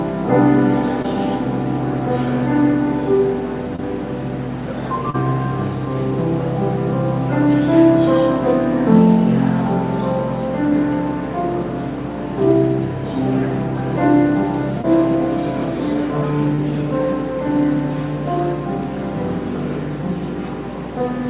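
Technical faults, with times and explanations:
1.02–1.06, 3.76–3.80, 5.10–5.16, 14.82–14.86 and 16.56–16.60 s: short concealed packet loss. Each time about 20 ms of audio (40 ms at 5.10 s) arrived too late, so the receiver extended the last sound and blended back, leaving a quick smear or wobble.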